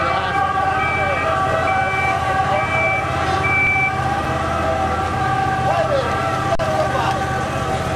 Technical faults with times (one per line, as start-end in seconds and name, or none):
3.67 underrun with held sample
6.55-6.59 underrun with held sample